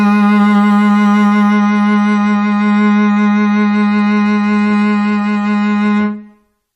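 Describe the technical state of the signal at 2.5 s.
At 2.5 s the music is inside an adaptive stream at a lower bitrate, running from 1.52 s to the end. The connection forced a cheaper version: nothing above 10.4 kHz, swirly codec artefacts, which fits MP3 falling from 128 to 40 kbit/s. Unlike a dropout, the switch is sudden but gapless.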